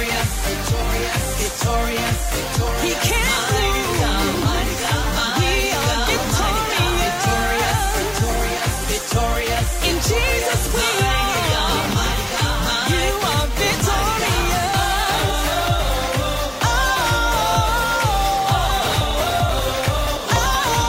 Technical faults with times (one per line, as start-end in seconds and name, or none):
18.82-20.74 periodic USB or driver dropouts